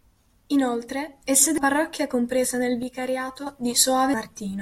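Speech, with two spots of damaged data in the compressed stream at 1.58 s, just before "parrocchia compresa nel", and at 4.14 s: each is where the decoder lost sync and searched for the next frame header. After "parrocchia compresa nel", from 2.83 to 3.47 s, voice and background together drop about 6 dB at once, likely a sudden gain jump applied without a ramp.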